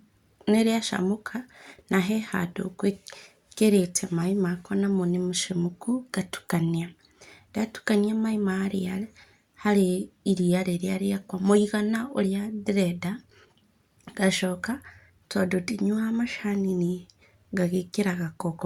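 Listening to this speech recording, nothing stood out as a technical problem at any point.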